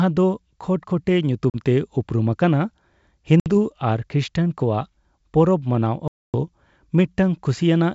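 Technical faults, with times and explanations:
1.50–1.62, 3.40–3.47 and 6.08–6.35 s: packet loss on an ADPCM call leaves silent holes of 40, 60 and 260 ms, then the desynchronised decoder brings speech back slightly distorted.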